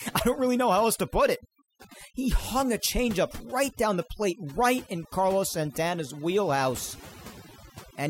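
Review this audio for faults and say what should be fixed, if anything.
Overdone noise removal runs through the whole speech clip. The noise reduction was set too aggressively, so any frequency band close to the level it judged to be noise gets pulled down hard or shut off entirely, and the quieter components of the speech are caught along with it. The gaps between phrases drop to near silence dotted with twinkling artefacts. Prevent it by setting the reduction depth conservatively and checking quiet speech passages before committing.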